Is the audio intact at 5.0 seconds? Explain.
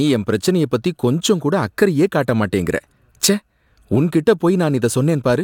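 Yes, at 5.0 seconds the speech plays through cleanly with no dropout, click or distortion.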